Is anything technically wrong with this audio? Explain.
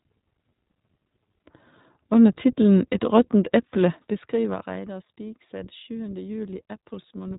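Yes. Throughout the speech, the sound is dull and boxed-in, with a slightly rough, synthetic edge that is plainly audible. That is the iLBC codec: nothing above about 3.8 kHz survives, and each 20 ms frame's excitation is coded independently, which fits its 15.2 kbps mode.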